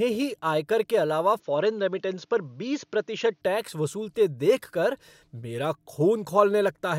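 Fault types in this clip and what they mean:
Input switched to a poorer device: the recording likely moved to a narrower-band microphone or headset path after "ही आयकर के अलावा", so from 1.40 to 3.41 s nothing reaches above 6.9 kHz. The speech turns dull, with faint new background noise, no gap and little level change, before clearing at "टैक्स वसूलते देखकर मेरा".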